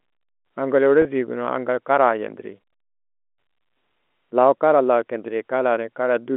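At 1.02 s, a brief packet loss with pitch repetition interrupts the speech until about 1.05 s. Roughly 30 ms of audio went missing, which fits a single lost packet. The receiver filled the gap by repeating the last pitch period, so the speech holds briefly with a slight buzz before resuming, all within the narrow telephone band of the G.711 line.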